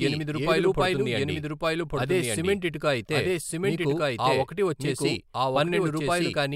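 It's a speech clip with a doubled audio track running the whole way through: a second, full-band copy of the speech trails the original by about a second, at roughly the same loudness, so every phrase comes back clean and dry with no decay or room sound on it. That fixed lag and dry character point to the likely cause: the same signal being captured twice, with one path running a second behind.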